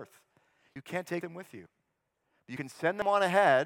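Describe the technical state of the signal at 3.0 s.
At 3.02 s the recording likely dropped audio between chunks, losing roughly 50 ms as one 0.5 s block closed and the next opened, so the speech skips abruptly.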